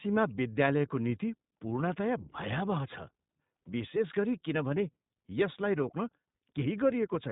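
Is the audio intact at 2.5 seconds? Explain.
No, not quite. At 2.5 seconds the speech is running through the iLBC codec, which affects the whole clip. It's a narrowband VoIP codec, so nothing above about 3.8 kHz survives. It codes each 20 ms frame's excitation on its own without borrowing from the frame before, and at this rate, which sounds like roughly 15 kbps, the damage is plainly audible: the speech stays clear but comes out dull, rough and a bit synthetic.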